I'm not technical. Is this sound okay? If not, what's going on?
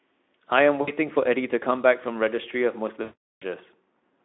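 No. Pieces of this speech went missing in transit, VoIP packet loss concealed by the speech codec: at 0.81 s a brief 60 ms gap, and from 3.01 to 3.43 s a longer 400 ms one, where the decoder stretches the last sound into a fading buzzy tone or noise before recovering.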